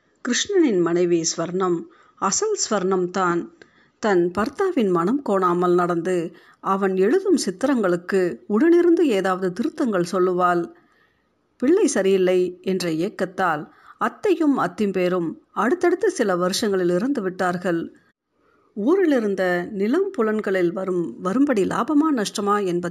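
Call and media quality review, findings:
Imaging from linear upsampling, 4.15 s to end: dulled top end, faint metallic shimmer on sibilants; mirror images at 8–16 kHz, about 30 dB down, consistent with straight-line 16 to 48 kHz resampling.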